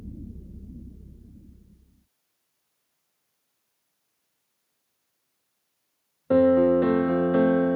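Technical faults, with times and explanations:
No technical faults heard.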